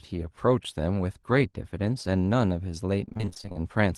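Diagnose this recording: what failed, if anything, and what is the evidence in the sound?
The network stage failed: repeated packet loss (robotic sound) from 3.05 to 3.56 s. Thirteen gaps, the longest about 26 ms, were patched by extending earlier sound, concealing roughly half the stretch. A spectrogram shows smeared, repeated frames; the waveform stutters.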